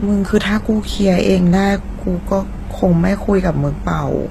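Throughout, the speech carries two mismatched layers of coding artefacts and nothing above 15.6 kHz, likely transcoding between lossy codecs, fitting low-rate HE-AAC re-encoded as Opus.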